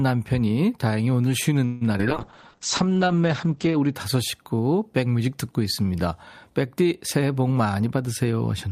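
At 1.65 s the incoming packets were likely held up in transit, leaving the jitter buffer empty. For about 0.16 s, until 1.83 s, the receiver stretches the last bit of sound into a short fading buzz. Once packets flow again the speech resumes where it stopped. Nothing is lost, but a 156 ms pause has been pushed into the flow, and the delay grows by the same amount.

Just after this, two short stretches of audio miss the decoder's deadline. The first runs from 1.93 to 1.96 s and the second from 1.98 to 2.01 s. Each time the receiver conceals the hole by carrying the previous sound forward for about 10 ms and then blending back. About 20 ms of real signal is gone in each. Each one comes through as a quick smear or wobble, two in close succession.

From 2.09 s the call's bandwidth estimate collapses, and the encoder is forced to code with far fewer bits. That is a call bitrate drop. The top of the spectrum falls from 20 kHz to 8 kHz, which points to a fall from around 64 kbps to about 9 kbps. 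The rate stays at its lowest for roughly 1.7 s. Through this stretch the speech sounds muffled and rough, with a watery graininess, until fuller quality returns at 4.01 s.

From 7.56 to 8.66 s the jitter buffer is holding more audio than its target. To bring the delay back down, the receiver repeatedly trims out pitch-period-sized slices, about a tenth of a second in total. This jitter buffer speed-up makes the speech play about 8% fast, 108% of normal speed, with the pitch unchanged. The last second sounds hurried.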